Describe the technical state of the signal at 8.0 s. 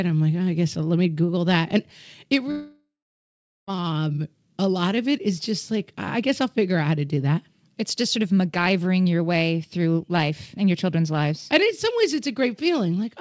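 At 8.0 s the signal is intact, with no dropout, glitch or distortion, only the band-limited sound of the G.722 call path, which leaves nothing above 8 kHz.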